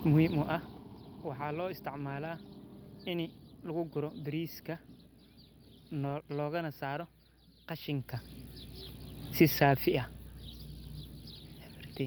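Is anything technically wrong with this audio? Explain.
Yes, two faults are present.

Mains hum runs through the whole recording as a steady 60 Hz tone, roughly 20 dB below the speech. A ground loop or nearby transformer is feeding the power-line frequency into the signal path, leaving a constant low drone under everything.

A lost packet rebuilt from error correction occurs at 0.43–0.45 s, 1.93–2.15 s, 6.05–6.15 s and 9.57–9.71 s, covering about 20, 120, 60 and 80 ms. The decoder filled each loss with the low-bitrate copy carried in the next packet, so there's no gap, but those stretches sound rougher and noisier. The fader-style level changes can be heard as gradual rises and falls in loudness.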